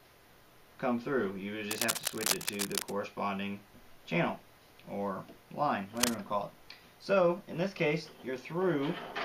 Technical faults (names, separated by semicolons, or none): cable scratch noise